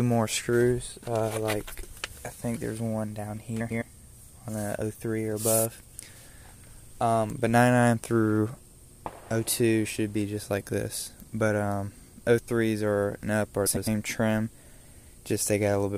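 At 1.9 to 2.11 s, 3.6 to 3.82 s and 13.66 to 13.88 s, frames out of order: two adjacent blocks of about 0.1 s each, which fits four-frame runs, play swapped. Each stretch flutters garbled, and no time is lost.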